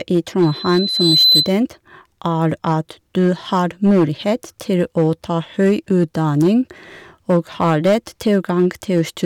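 Hard clipping runs through the whole speech clip: the signal is driven about 6 dB past full scale, so a small fraction of peaks are flattened, adding crackle and harsh upper harmonics. From 0.42 to 1.55 s, a loudspeaker feedback squeal appears: a 4 kHz tone swells over well under a second to sit a few dB above the speech before it ends.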